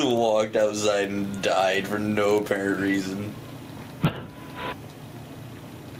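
Gain pumping runs through the whole clip: the gain swings by around 10 dB with each loud sound, leaving the level squashed and breathing. The likely cause is gain set far too high, with a fast limiter clamping it.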